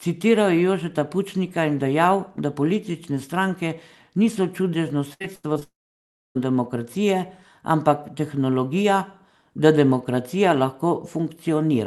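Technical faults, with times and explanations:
5.13–5.63 s, repeated packet loss (robotic sound): right after "politične stranke niso čudežno", five short holes, the longest about 79 ms, cover roughly 40% of this half second. Each hole is patched by repeating the last received sound, so the speech turns choppy.
5.63–6.37 s, long network dropout: the patched sound carries on briefly, fades, then about 0.63 s of silence follows before the speech returns at 6.37 s with that part missing. The likely cause is a stall in packet delivery too long for concealment to cover.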